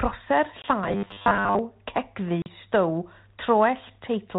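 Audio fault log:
0.62–0.66 s and 2.42–2.48 s, packet loss on an ADPCM call: silent holes of 20 ms and then 40 ms, about one and two packets' worth, with hard vertical edges in the waveform and blank spectrogram columns. After each gap the decoder's predictor and step size no longer match the sender's, so the sound resumes with brief, slight distortion that settles within tens of milliseconds.
0.84–1.59 s, robotic sound from repeated short buffers: a rigid, metallic 100 Hz buzz that still loosely tracks the sound. It likely comes from the playback side re-using the last buffer while fresh audio is skipped, with most of the audio in this stretch replaced by repeats. That fits a 10 ms buffer. The spectrogram shows evenly spaced horizontal harmonics at multiples of 100 Hz, and the waveform shows identical blocks repeating every 10 ms.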